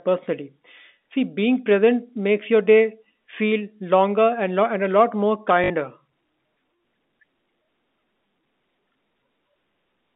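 Packet loss with the last packet repeated occurs from 5.64 to 5.70 s, right after "lot more". About 60 ms of audio went missing, which fits three lost 20 ms packets. The receiver filled the gap by replaying the last good packet until new data arrived. Each loop repeats every 20 ms, so the run buzzes at roughly 50 Hz, a brief robotic stutter heard through the narrow 200 Hz to 3.7 kHz telephone band of the G.711 line.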